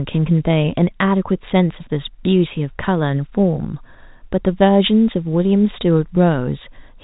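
No technical faults occur in this speech, which carries the narrow sound of ordinary G.711 telephone coding.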